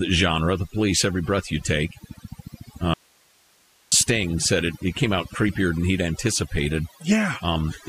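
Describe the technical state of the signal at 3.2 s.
At 3.2 s the speech has cut out: an audio dropout to a faint residue runs from 2.94 s to 3.92 s, about 0.98 s. The wanted signal likely vanished upstream while the path after the break stayed live, so the gap holds only hiss, roughly 35 dB below the speech level. The cut-out and the return are both abrupt. A natural pause would keep the room's background, and a fade would slope in and out.

Overdone noise removal also applies at this moment, as it does across the whole clip. The reduction is set so strongly that it drives individual frequency bands down or off whenever they sit near its noise estimate, and quiet parts of the speech are lost with them. Around the gap the background drops and breaks up into twinkling artefacts. The cause is aggressive subtraction of bands, not a low-bitrate codec, because the artefacts follow the noise floor rather than the loud parts of the signal.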